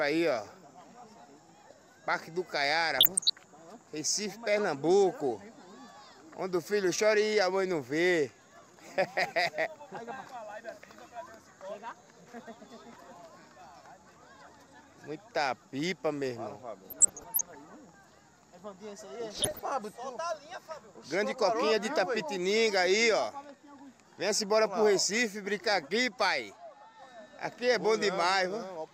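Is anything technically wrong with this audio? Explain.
Yes. DAB burbling occurs at 2.98–3.36 s, 16.86–17.55 s and 19.33–19.59 s. Bit errors of around one percent or less slip past error correction and corrupt MP2 samples and scale factors, so single sub-bands jump in level. The result is short noise blips and sub-band level jumps rather than the silent gaps of a dropout.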